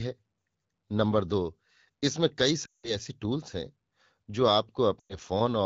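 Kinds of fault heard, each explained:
Lost AMR speech frames: radio errors corrupted runs of frames, so the wideband decoder reused its last good pitch and vocal tract settings with falling gain. At 2.65–2.96 s and 4.99–5.16 s the speech quickly drops to near silence. Spectrograms show frozen, tapering harmonics; waveforms show a shrinking envelope.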